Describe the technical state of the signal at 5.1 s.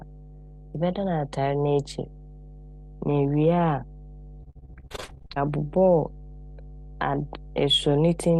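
At 5.1 s the speech sits inside a burst of repeated packet loss (robotic sound) running from 4.43 to 5.38 s. Packets kept going missing or arriving late, and each hole was filled by stretching the preceding sound before the next dropout arrived. Nearly half of that span is concealment, with individual holes up to about 51 ms. The result is choppy speech with fragments missing. On the waveform, the envelope breaks into short repeated, smeared segments. A spectrogram shows smeared, frozen-looking harmonic blocks and abrupt cuts instead of smooth formant movement.

Underneath, mains hum at 50 Hz runs through this moment as it does the whole clip, roughly 15 dB below the speech. It comes from a ground loop or a nearby transformer leaking the power line into the signal, heard as a constant low drone with a few low harmonics. A spectrogram shows it as a steady horizontal line at 50 Hz, with fainter lines at its multiples, that stays put through the packet-loss chop. 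The waveform shows a slow periodic ripple under the speech. The call path's Opus coding caps the content around 12 kHz, visible as an empty band above that.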